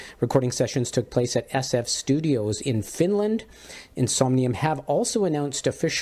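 No technical fault can be heard anywhere in this audio. There is nothing to locate in time and no cause to point to.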